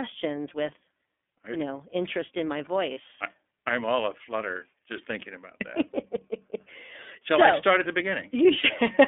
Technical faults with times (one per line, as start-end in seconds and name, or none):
0.00-9.07 iLBC codec
2.94-2.98 lost iLBC frames
8.61-8.65 lost iLBC frames